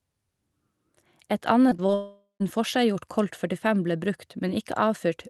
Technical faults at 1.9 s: short concealed packet loss; long network dropout

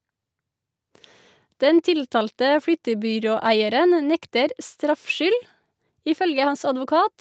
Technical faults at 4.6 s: none

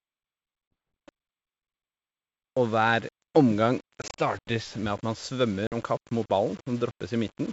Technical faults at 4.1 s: low bit depth without dither; packet loss on an ADPCM call

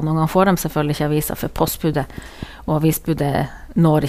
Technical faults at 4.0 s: none

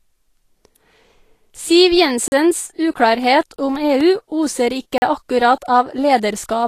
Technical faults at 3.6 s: Vorbis compression; periodic USB or driver dropouts; block of digital silence

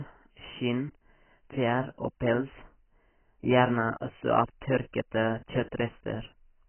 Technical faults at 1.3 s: AAC compression

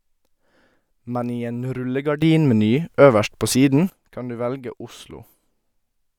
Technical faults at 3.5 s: sudden gain jump

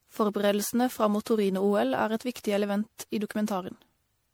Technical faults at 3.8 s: generation loss

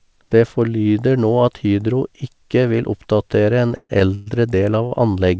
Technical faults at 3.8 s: call audio freeze

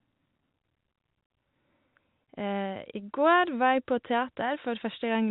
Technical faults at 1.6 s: none

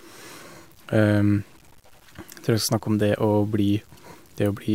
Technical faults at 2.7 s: low bit depth without dither

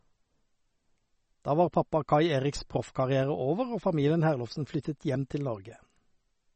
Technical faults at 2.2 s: MP3 compression

